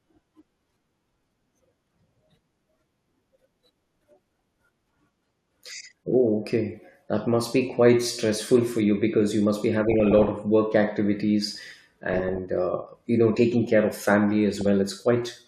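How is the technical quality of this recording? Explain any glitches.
The speech is repeatedly marred by DAB burbling at 1.73–2.47 s, 3.36–4.37 s, 5.85 s, 9.84–10.39 s after "because you must be", 11.44–12.38 s before "uh you know taking", and 14.55–14.66 s after "taking care of family". Weak reception leaves residual bit errors, under one percent, in the MP2 stream. Corrupted scale factors make individual sub-bands jump for up to a frame; heavier patches bubble, chirp and squelch, lighter ones give a few watery blips.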